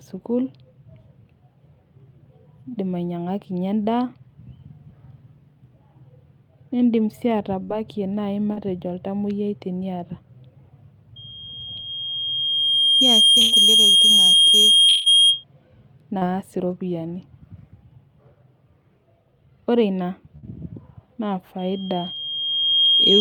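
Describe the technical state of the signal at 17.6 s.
At 17.6 s the signal is intact, with no audible fault at that moment.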